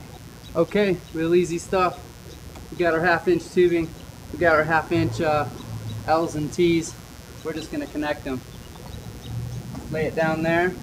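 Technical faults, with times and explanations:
Throughout, mains buzz: there's a steady, raspy buzz sitting roughly 25 dB under the sound for the whole clip. It's built on 60 Hz mains, so you're hearing a stack of 60 Hz harmonics running up into the several-kHz range rather than a smooth hum. That edge comes from sharp switching spikes, twice per mains cycle, getting into the signal path, the sort of thing a dimmer, rectifier or missing shield lets in.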